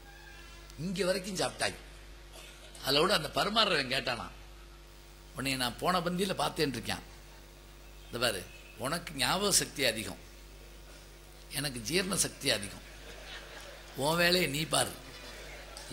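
From 0.87 s to 4.87 s, the adaptive stream switches to a lower bitrate. The change is sudden, with no gap. Codec artefacts rise. This fits a low-rate HE-AAC version near 20 kbit/s. Full quality returns abruptly at 4.87 s.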